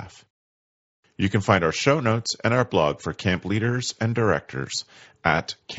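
At 4.12 s there is a brief concealed Bluetooth headset packet loss: about 15 ms of audio, which fits two lost frames, never arrived, and the receiver filled the gap by repeating a matching stretch of recent waveform. It sits within the mSBC wideband audio.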